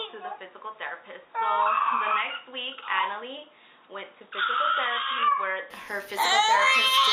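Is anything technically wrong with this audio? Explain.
Yes. From the start to 5.70 s, the audio is dull and boxy, with nothing above 3.8 kHz. It is also roughly 5 dB quieter, over a faint noise floor. At 5.70 s it clears up with no gap. This is likely an input switched to a poorer device, such as another microphone or a headset's call profile. Such a device passes a narrower band and brings its own level and noise. The return to the fuller input restores the missing top end.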